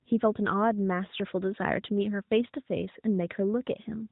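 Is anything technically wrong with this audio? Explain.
No, the speech comes through an AMR narrowband mobile channel at 12.2 kbps, which limits it to the band below 4 kHz as that codec always does, and nothing in the signal points to a technical problem.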